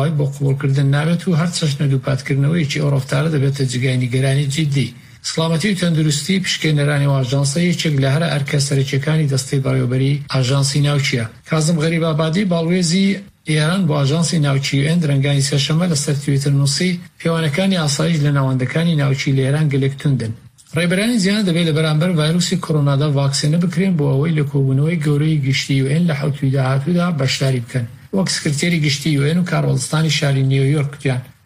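No technical faults are audible.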